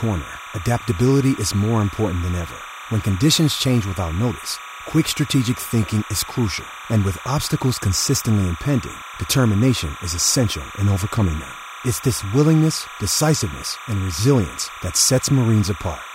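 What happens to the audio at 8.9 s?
At 8.9 s, as throughout the clip, timecode bleed runs behind the speech: a chirping warble well below the speech, flipping between pitches near 1 and 2 kHz. Linear timecode at 30 frames per second leaks in, and that two-pitch switching distinguishes it from a steady whistle or hum.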